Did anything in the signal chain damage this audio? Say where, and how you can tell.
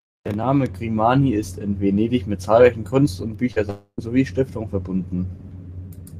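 Yes, the network stage. A burst of packet loss at 3.51 to 3.58 s: the receiver stretched the last sound for about 47 ms, turning it down as it went, then skipped about 40 ms. It is short and never reaches silence, which separates it from a dropout.

A second, longer gap from 3.70 to 4.00 s is likely a long network dropout. The concealed sound fades over roughly 275 ms into about 80 ms of silence, and about 280 ms of speech is lost. Unlike the burst, the fill runs out completely.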